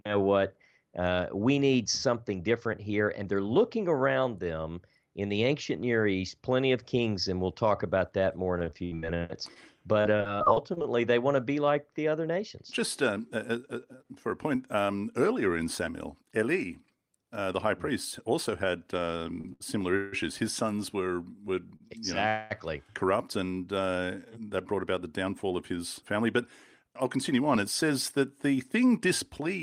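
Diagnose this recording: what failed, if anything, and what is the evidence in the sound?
Network stage, repeated packet loss (robotic sound): from 8.59 to 10.86 s, packets kept failing to arrive, leaving 18 holes patched by continuing the previous sound. About 240 ms of speech is lost, the longest gap 73 ms, so the stretch sounds choppy.

Jitter buffer speed-up: the receiver's buffer grew too deep and was trimmed by removing short pitch-period slices. From 13.12 to 14.76 s, ending before "earlier in", speech runs at 107% with about a tenth of a second removed. From 24.34 to 27.91 s, between "know corrupt and uh" and "that the thing", it runs at 106% with about a fifth of a second removed. Pitch stays put but delivery sounds hurried.

Short stall from a late packet: the jitter buffer briefly ran dry and the receiver held the last sound until the packet turned up, so nothing is missing. 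Holds of 38 ms at 19.41 s, 75 ms at 19.53 s, and 39 ms at 21.76 s after "sons were were" each stretch a sound with a slight buzz or dip.

Call audio freeze: at 19.96 to 20.14 s and 22.28 to 22.52 s the sound hangs as a continued buzz or hiss for 162 ms and 221 ms, never dropping to silence, then resumes where it stopped. The likely cause is packets delayed in transit emptying the jitter buffer, which adds a gap without losing speech.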